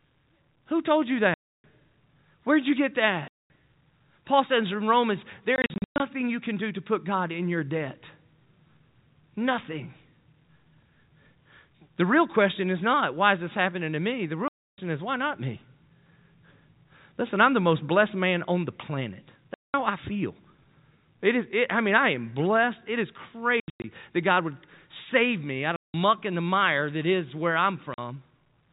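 The speech drops to dead silence with hard edges at 1.34–1.64 s, 3.28–3.5 s, 5.56–6.0 s (a cluster of short holes, the longest 0.12 s, just before "you can do to"), 14.48–14.78 s, 19.54–19.74 s (between "man on the planet" and "I feel"), 23.6–23.84 s (broken holes up to 0.1 s), 25.76–25.94 s (between "would save me out" and "and the mire that") and 27.94–27.98 s. This is packet loss filled with silence. Every gap is a multiple of 20 ms, which points to 20 ms packets. The receiver played nothing for each missing packet, so the waveform cuts off abruptly. The audio is band-limited below 4 kHz, consistent with G.711 telephone coding.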